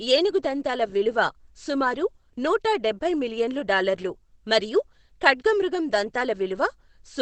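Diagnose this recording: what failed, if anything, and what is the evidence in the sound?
The codec stage likely used heavy Opus compression in its speech mode, consistent with about 12 kbps: throughout, the speech sounds muffled and hoarse, with nothing above 8.5 kHz.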